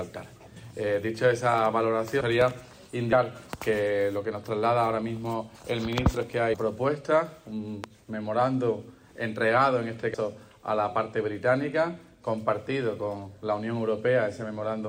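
At 0.55 s the audio jumps forward by a few hundred milliseconds. This is compressed frames skipped: whole 21.3 ms frames were never decoded. The overlap between neighbouring frames turns each join into a short smeared blip, not a click. A larger jump of about half a second follows at 2.20 s. Between 2.41 and 2.53 s two sharp pops sit on top of the sound, peaking about 10 dB above it. This is a loud pop pair, likely from an electrical step such as a switch or plug. Further frame skips occur at 3.11 s (roughly 150 ms lost), 6.53 s (roughly 300 ms) and 10.13 s (roughly 200 ms). A single louder pop, about 15 dB above the signal, lands at 7.84 s, and the sound continues beneath it.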